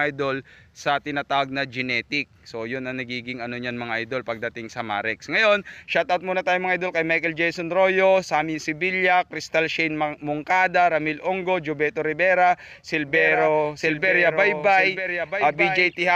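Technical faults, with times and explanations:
13.08 s to the end: doubled audio track. From this point a second, full-band copy of the sound runs about one second behind the original, roughly 5 dB quieter, and it continues to the end of the clip. It is likely a second capture through a slower path or an edit leaving two copies out of step. What separates it from room reverberation or a tape-style echo is that the copy carries no decay or room colour, cuts in abruptly at 13.08 s, and repeats only once.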